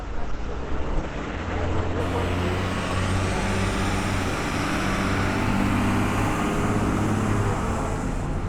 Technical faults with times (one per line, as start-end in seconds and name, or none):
0.00-2.00 adaptive stream starting at a low bitrate